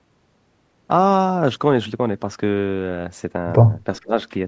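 At 4.01 s the speech suddenly sinks, dropping by roughly 25 dB until 4.14 s, then returns. This is speech suppressed in double talk. The likely cause is an echo canceller mistaking this talker for loudspeaker echo while the far side spoke, and ducking everything.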